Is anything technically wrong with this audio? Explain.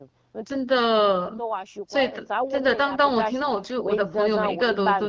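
No, nothing here is technically wrong.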